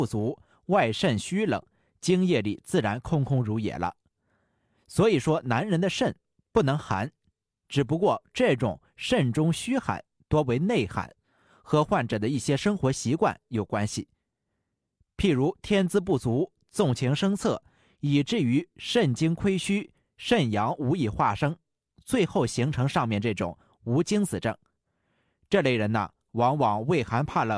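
Nothing in this speech recording gives any sign of a technical fault, so there's nothing to point out anywhere along it.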